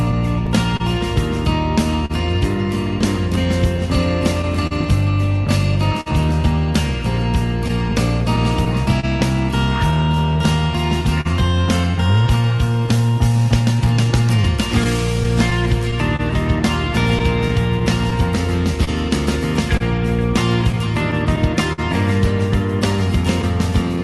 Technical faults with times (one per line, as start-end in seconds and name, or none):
0.00-24.03 clock drift between sender and receiver
0.11-12.89 scattered short gaps
1.78-23.98 repeated timing corrections
14.84-23.74 scattered short gaps